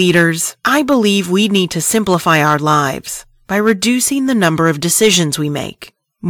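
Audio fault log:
Throughout: hard clipping. Speech peaks driven about 5 dB past the ceiling are cut flat on roughly one percent of samples, adding crackle on loud syllables.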